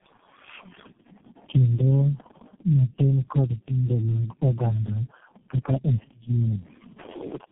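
Throughout the speech the sound is rough, muffled and warbly, with nothing above about 3.8 kHz. This is tandem speech coding. The call seems to have crossed several links with their own low-rate speech codecs, decoded and re-encoded at each border, so each coder worked on the previous one's damaged output. The build-up of grit and smearing suggests about four such coders in a row, the last resembling G.723.1 at 6.3 kbit/s.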